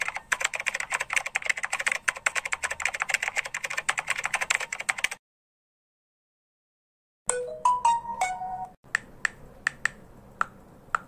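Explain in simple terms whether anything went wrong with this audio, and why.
Nothing went wrong here; listening closely, there's no glitch, dropout or other technical problem anywhere in the recording.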